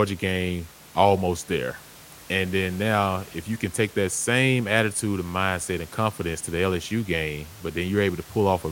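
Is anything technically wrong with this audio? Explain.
No, nothing in this speech recording points to a technical fault. The only other sound is the room's own background noise, sitting about 22 dB below the speech, which belongs to the recording rather than to the system.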